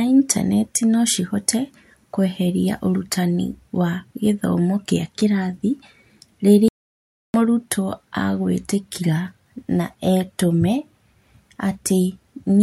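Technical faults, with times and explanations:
6.68–7.34 s, audio dropout to silence. The speech stops partway through and resumes about 0.66 s later, and the gap between is silent. No room tone or background hiss survives inside it, so the signal itself was absent, not just quiet. That points to lost input, likely a momentary disconnection, a broken link or an accidental mute, while recording carried on writing silence. Whatever was said in that stretch is gone.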